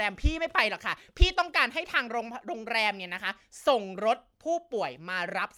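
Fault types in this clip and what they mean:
No faults are present.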